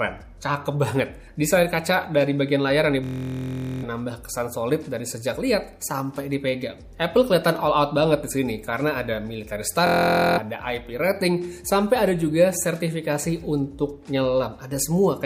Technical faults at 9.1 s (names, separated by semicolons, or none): none